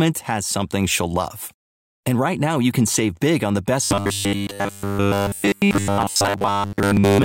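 Robotic sound from repeated short buffers starts at 3.84 s and runs to the end of the clip. From that point the speech becomes a rigid, metallic buzz at 100 Hz that still loosely tracks the words. The likely cause is audio arriving too slowly, so the software repeats a 10 ms fragment to fill the gaps, covering most of the time while the real audio in between is skipped.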